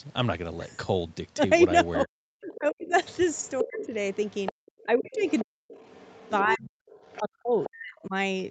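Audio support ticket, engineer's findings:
Speech suppressed in double talk at 2.04–2.93, 3.63–3.91, 4.52–5.7 and 6.42–8.14 s. Near end dips up to about 40 dB only while the far end talks, unlike packet-loss gaps. Likely echo canceller over-suppressing.

Other side's voice leaking through, 2.54–8.04 s, about 15 dB under the talker. A second voice sits inside the near-end signal, unlike room pickup. Likely residual loudspeaker echo, not fully cancelled.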